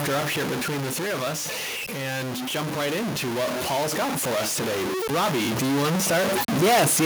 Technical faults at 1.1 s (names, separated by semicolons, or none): stuck bit; automatic gain falling